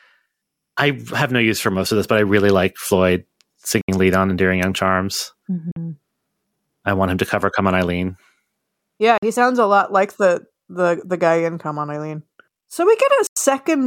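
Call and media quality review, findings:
Short silent holes in the speech at 3.81 s (70 ms), 5.71 s (46 ms), 9.18 s (46 ms), 13.27 s (93 ms); speech resumes as if it played on. Likely Bluetooth dropout: late packets discarded, each gap fitting two to four packets.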